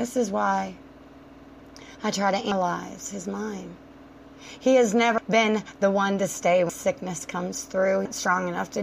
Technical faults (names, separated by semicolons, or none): compressed frames skipped